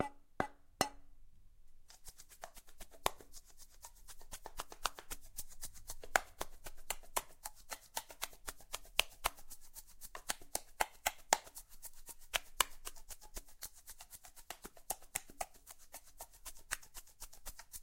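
A recording of sounds with nothing technically wrong to point out anywhere in it.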